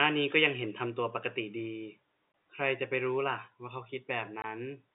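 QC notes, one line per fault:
2.32–2.34 s and 4.42–4.44 s, packet loss filled with silence: each 20 ms gap, which fits a single lost packet, drops the sound to dead silence with abrupt edges. On the waveform it looks like a flat-line notch; on the spectrogram, a thin vertical blank stripe inside the telephone-band speech.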